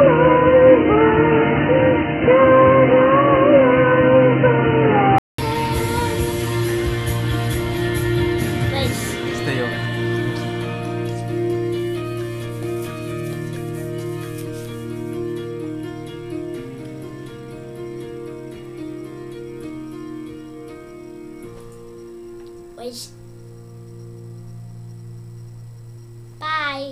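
Up to 5.38 s it's dull and boxy, nothing above 3 kHz, faint background noise; a 200 ms gap, likely the input switched from a poorer device.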